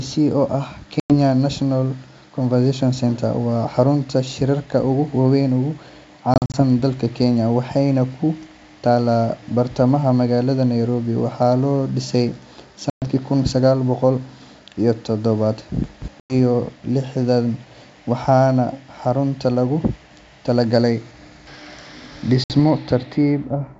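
Speech over a G.722 wideband telephone link, clear up to around 7 kHz, suffers packet loss on an ADPCM call five times. Dropped packets were filled with silence, leaving the decoder's predictor and step size mismatched with the sender's. Hard-edged gaps appear at 1.00–1.13 s (100 ms lost), 6.34–6.62 s (120 ms scattered over 200 ms, longest run 40 ms), 12.90–13.09 s (120 ms), 16.20–16.34 s (100 ms) and 22.44–22.55 s (60 ms). The sound then resumes with brief, slight distortion. Between 15.84 and 16.08 s, chunks arrive out of order: one 60 ms chunk was delivered three chunks late and plays after the audio that should follow it. This creates a jumbled moment with three hard joins.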